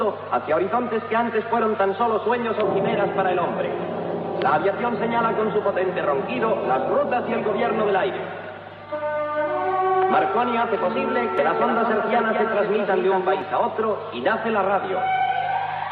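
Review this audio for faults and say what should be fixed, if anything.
There's a doubled audio track from 11.38 to 13.42 s. A second full-band copy of the sound sits around a fifth of a second behind the original and a few dB quieter. It's a dry, exact repeat with no tail or room tone, and it cuts in and out abruptly at both ends. That points to the same signal being mixed in twice, likely through a second, slower capture path or an edit that left two copies out of alignment. To prevent it, make sure each source reaches the mix by only one route and check edit points for leftover overlapping copies.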